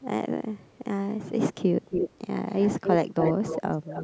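Speech, with a likely echo leak from a far-end echo canceller returning delayed voice copies: faint at 0.59–0.79 s (0.34 s late), near full level at 1.82–2.18, 2.48–2.97 and 3.19–4.03 s (0.26 s late).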